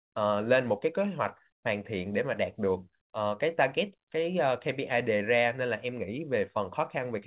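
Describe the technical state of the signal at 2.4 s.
At 2.4 s the speech is intact, carried in the usual telephone-band sound of mu-law G.711 coding, with nothing above 4 kHz and no fault present at that moment.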